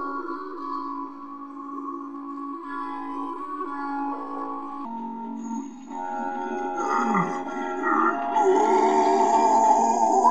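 A section at the wrong speed runs from 4.85 s to the end of the clip, playing at 0.82 times the original rate. Pitch and tempo drop together, roughly three semitones lower and noticeably slower, which points to a likely clock or sample-rate mismatch during editing or playback.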